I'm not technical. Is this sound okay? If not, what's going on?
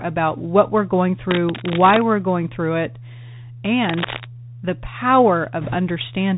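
No, it isn't. The whole clip passes through the Bluetooth CVSD headset codec, the basic phone-call mode of a wireless headset. Everything above about 4 kHz is gone, so the speech sounds muffled and boxy, with scratchy s sounds and a fine grainy hiss underneath. Unlike a background-noise problem, this hiss and dullness never stop, because the link itself carries them.

From 1.30 to 2.02 s, between "about what we're going" and "we're going through it", and again from 3.80 to 4.26 s, a loud rough scratching or rustling sits almost as high as the speech. This is likely cable scratch noise from a worn plug or lead being moved. It comes in uneven bursts rather than as a steady hiss.

From 5.61 to 5.77 s there is a brief rushing crackle caused by bit errors on a Bluetooth voice link, where a few percent of the wireless data arrived corrupted. Unlike a scratchy cable, it makes no sharp clicks, only a short spell of fizzy noise over the speech.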